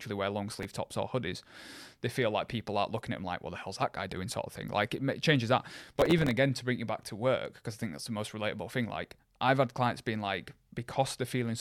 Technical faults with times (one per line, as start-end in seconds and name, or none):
0.51-0.75 processor overload crackle
5.87-6.31 processor overload crackle